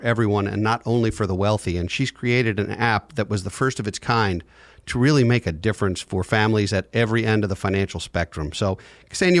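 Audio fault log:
No fault is heard in the speech.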